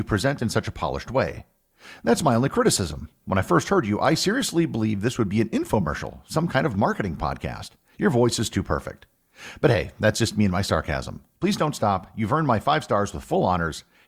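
No technical faults can be heard anywhere in this speech recording.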